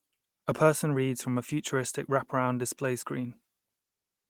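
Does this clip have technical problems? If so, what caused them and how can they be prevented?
No, this speech clip has no technical fault to trace, so there is nothing to prevent.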